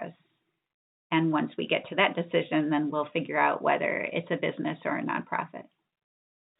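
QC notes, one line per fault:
Nothing here needs flagging; the speech carries the narrow, telephone-band sound of G.711 coding, with nothing above 4 kHz, exactly as that format should.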